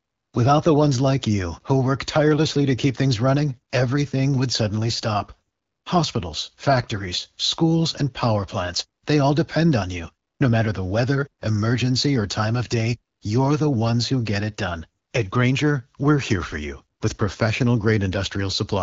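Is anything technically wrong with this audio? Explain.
No, nothing is technically wrong with this audio.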